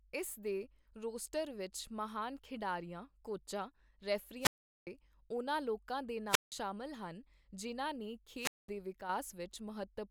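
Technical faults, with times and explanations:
4.39–4.87 s, 6.27–6.52 s, 8.37–8.70 s, wireless microphone squelch dropout: hiss swells, then near silence for 0.40, 0.17 and 0.21 s as the fading radio signal trips the receiver's mute.
9.01–9.09 s, one channel drops out: the sound briefly dips by about 6 dB, likely one stereo channel vanishing so the mono sum loses half its shared content.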